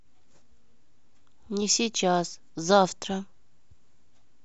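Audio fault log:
No technical fault can be heard in the speech at any point, with the signal holding steady and continuous throughout.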